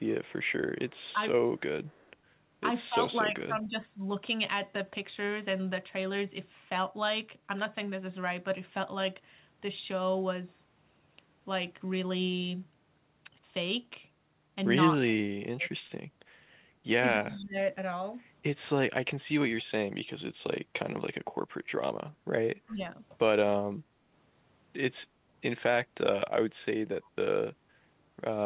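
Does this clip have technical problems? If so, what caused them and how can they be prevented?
Yes. Faint echo leak occurs from 0.25 to 2.11 s, at 17.3 to 17.36 s and at 22.67 to 22.74 s: a copy of the speech about 0.24 s late and roughly 30 to 35 dB down, likely from a loudspeaker echo canceller that didn't remove all of it. A spectrogram shows a weak, time-shifted ghost of the harmonics. A headset or a better-tuned echo canceller prevents it.

Speech suppressed in double talk appears at 2.89 to 3.73 s, 15.57 to 15.65 s, 17.11 to 17.55 s and 22.67 to 22.83 s. The level dips by between a few and about 20 dB, likely as the canceller mistakes the talker for echo, visible as notches in the waveform envelope. Full-duplex-capable echo cancellation prevents this.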